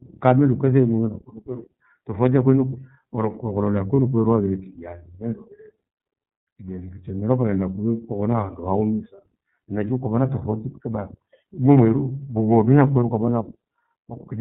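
Throughout, the speech passes through the iLBC codec: nothing above 4 kHz survives, and the rough, synthetic edge fits 30 ms frames at 13.33 kbps. At 3.95 to 4.00 s, lost iLBC frames leave a brief held, buzzy vowel where one frame was concealed, not a silent dropout, and the voice is right again almost at once.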